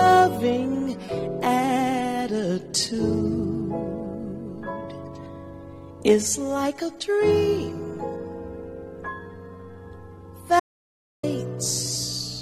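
At 10.6 s the audio drops out to silence for about 0.63 s, dead silence with no room tone, likely a lost input link, before resuming at 11.23 s.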